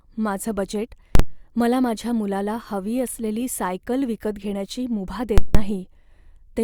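A calculation in the processing chain produced infinite or invalid numbers, and the output was pinned at full scale for a whole block, giving invalid numbers at full scale in this speech clip. At 1.15 s, between "माझं बजेट" and "मला माझ्या मुलाला", a 43 ms block (consistent with 2048 samples) lands as a single loud bang. At 5.38 s, after "सायकल विकत घेण्याची मुभा", a 171 ms block gives a violent pop at its start and end with nothing audible between, until 5.55 s.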